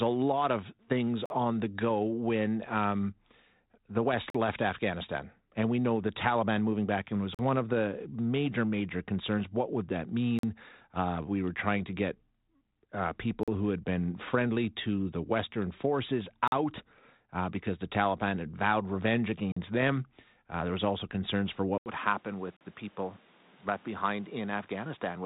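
Gaps between chunks appear at 1.26, 4.30, 7.35, 10.39, 13.43, 16.48, 19.52 and 22.57 s. Each is a 44 ms hole, repeating every 3.0 s. No sound is lost, but the flow breaks at every join.

At 21.78 s the sound cuts out for about 80 ms and then returns about 5 dB quieter, with a new background noise roughly 30 dB below it and a duller character through to the end. This was likely the input switching to a poorer device. The light G.726 band limit at 3.8 kHz is audible throughout.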